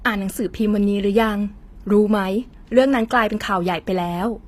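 HE-AAC compression runs through the whole clip, and the sound points to it as the likely cause. The speech carries plainly audible codec damage and has nothing above 15.5 kHz. The upper band seems rebuilt by spectral band replication, copied up from lower bands under a coarse envelope, which fits a low bitrate around 24 kbps. The treble is not the original, and its harmonics don't line up with those below, so s sounds come out gritty, metallic or lispy.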